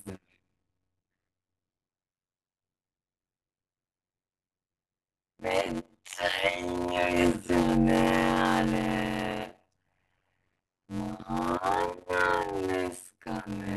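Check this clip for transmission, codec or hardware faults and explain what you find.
There is one fault in this speech clip, present throughout.

Block size mismatch (padded), whole clip: each short block, consistent with 256-sample writes, is zero-filled to a longer read, causing a 91.9 Hz buzz and speech slowed to 0.533× at near-normal pitch.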